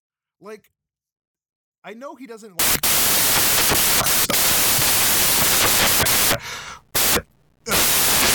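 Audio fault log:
2.59 to 8.35 s, samples built from the wrong bytes: just after "I know he doesn't", the reader starts assembling each sample from misaligned or swapped bytes, so the rapidly changing low-order bits land in the most significant position and dominate every value. The speech is replaced by loud, harsh broadband noise that runs to the end of the clip.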